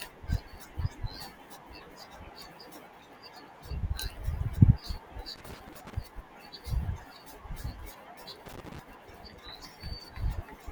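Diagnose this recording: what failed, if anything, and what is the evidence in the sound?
Loose connector crackle appears in two bursts, from 5.36 to 5.94 s and from 8.46 to 8.79 s. This is an analogue wiring fault: a worn or dirty contact repeatedly makes and breaks, chopping the speech signal, which is heard as irregular scratchy crackle.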